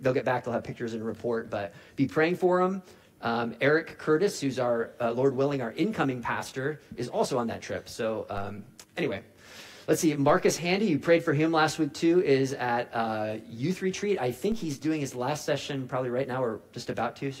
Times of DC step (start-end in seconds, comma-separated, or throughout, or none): 8.38, 10.29, 14.52